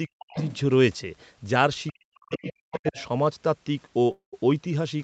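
Right at the start, from 0.07 to 0.36 s, the talker gets chopped down in what sounds like speech suppressed in double talk. Over about 200 ms the level drops by as much as about 40 dB, so the sound dips and breaks up. The likely cause is the echo canceller hearing both sides at once, failing to tell the talker from the loudspeaker echo, and turning everything down.

Overlapping that, from 0.33 to 0.59 s, the other side's voice leaks through, and fairly strongly, about 10 dB under the talker. It's a second voice sitting in the mix, most likely echo the canceller didn't fully remove. A faint scrap of the same leakage shows up at 1.87 to 1.92 s, about 35 dB down.

Then from 1.92 to 2.98 s comes the long stretch of double-talk suppression. Around a second of the talker's sound is pushed down, again by up to about 40 dB, so it fades and cuts out in pieces. Inside that stretch the other side leaks through at 2.71 to 2.78 s, about 20 dB down, and once more right as it ends, at 2.98 to 3.05 s, about 25 dB down. 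Both are short bursts.

Last, at 4.11 to 4.35 s, there's a call audio freeze. The sound holds as a fading buzz or hiss for a moment and then drops to about 130 ms of silence, 211 ms of fill in all. After that it picks up exactly where it stopped, with nothing lost, just pushed about 211 ms later. That pattern most likely comes from delayed packets letting the jitter buffer run dry. Throughout, nothing reaches above 8 kHz, which fits the call's band limit.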